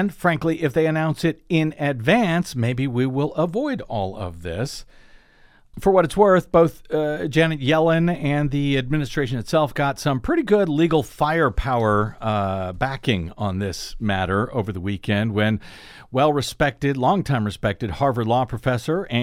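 Speech, with no audible technical faults anywhere.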